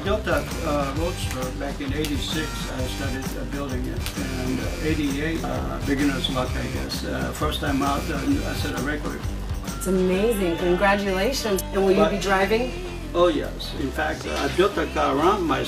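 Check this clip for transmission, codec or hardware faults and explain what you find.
Nothing to report: the whole clip was checked and no transmission, codec or hardware faults turned up.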